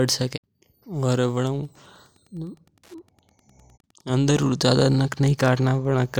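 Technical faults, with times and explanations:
1.55 to 6.19 s, Wi-Fi interference: a Wi-Fi radio sits close enough to the audio circuit that its transmissions couple in and are rectified, turning each radio beacon into a small audible click. The beacons repeat every 102.4 ms, so from 1.55 s to the end the speech carries a steady, faint ticking at about ten per second, sitting roughly 45 dB below the speech level.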